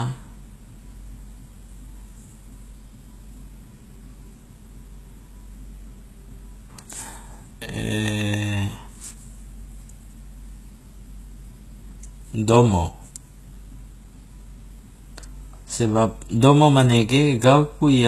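A speech recording that sounds thin and smeared throughout, with nothing above 12.3 kHz and the watery artefacts of a very low-bitrate encode. It is likely low-bitrate audio saved at a high bitrate: the pattern fits a 16 kbit/s HE-AAC source re-encoded as 256 kbit/s MP3, which adds bulk but cannot restore what was lost. From 13.72 to 14.72 s the top end dulls slightly, from channel delay (comb filtering). One channel trails the other by about a sample, roughly 0.02 ms, so summing to mono cancels highs, with the first notch at around 20 kHz.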